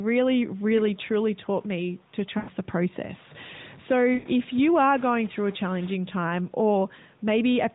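From 0.77 to 1.01 s, a faint delayed copy of the speech trails the talker by about 358 ms, well below the main level. This is likely an echo leak, where far-end loudspeaker sound slipped past an echo canceller.

At 2.38 to 2.50 s and again at 4.14 to 4.28 s, the speech smears, stretches and fades out. These are lost AMR speech frames. The narrowband decoder repeated its last good settings at falling gain. The gaps last 100 ms and 120 ms, fitting runs of five and six frames.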